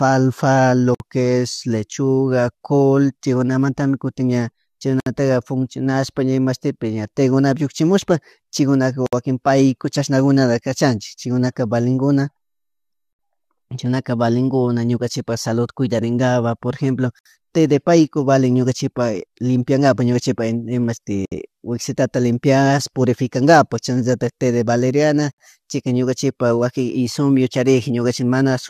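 Short dropouts of silence with smeared edges cut the speech every 4 s: at 0.95 s just before "es lechuga col chaykunamantami" (55 ms), then 64 ms each at 5.00 s after "col chaykunamantami kutin ña", 9.06, 13.13, 17.19, 21.25 s before "wisitata limpiash purificankapak chashnallatak", and 25.32 s. Each is a gap at a join of encoded pieces: separately encoded segments were concatenated with encoder delay and final-frame padding left in.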